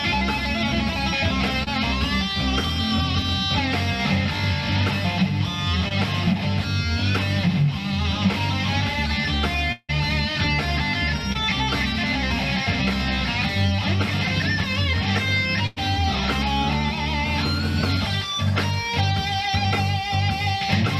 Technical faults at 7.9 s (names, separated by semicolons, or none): none